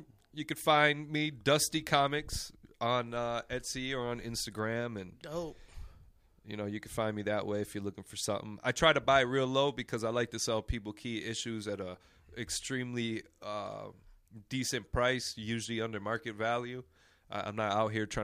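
No technical faults are audible anywhere in the recording.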